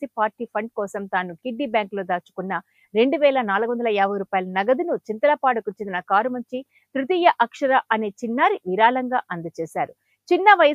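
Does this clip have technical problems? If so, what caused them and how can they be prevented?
No, nothing audible here points to a capture, transmission or processing problem, so there is nothing to trace back or guard against.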